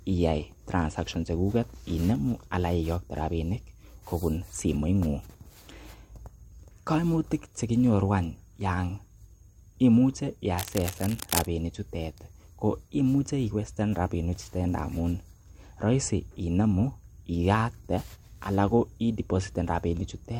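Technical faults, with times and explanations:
10.58–11.47 s, cable scratch noise: for just under a second, a dense, irregular burst of crackling and rustling sits over the speech, at roughly 10 dB below the signal. The uneven texture points to a contact whose resistance fluctuates rapidly as it is disturbed, likely a worn cable, connector or control being moved during the recording, which injects erratic noise into the signal path until the contact settles.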